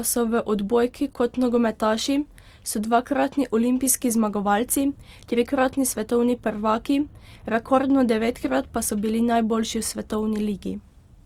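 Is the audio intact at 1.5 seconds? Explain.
No. At 1.5 seconds, as across the whole clip, the speech shows plainly audible Opus compression damage. It sounds grainy and rough rather than swirly. The likely cause is the music-mode (CELT) encoder running near 24 kbps, filling bit-starved bands with folded or noise energy. Bandwidth stays full, up to about 20.3 kHz.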